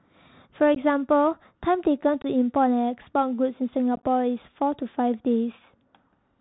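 The whole clip runs through a Bluetooth CVSD headset codec: narrowband speech with nothing above 4 kHz, scratchy s sounds and a grainy hiss underneath. Unconcealed Bluetooth headset packet loss punches abrupt holes at 0.75–0.77 s (15 ms gone) and 2.22–2.26 s (22.5 ms), then a rough, chopped patch around 3.96–4.03 s, with 45 ms lost in short bursts.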